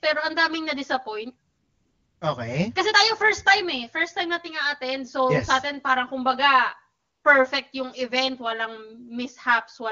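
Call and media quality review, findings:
Channel delay (comb filtering), throughout. Hollow, phasey tone. One channel lags about 10 ms before mono sum; fixed evenly spaced notches from around 40 Hz upward.

AMR comfort noise, 1.49–2.21 s (0.72 s) and 6.99–7.23 s (0.24 s). Real background replaced by smooth synthetic hiss. Speech frames halted by voice activity detection; receiver fills the gaps.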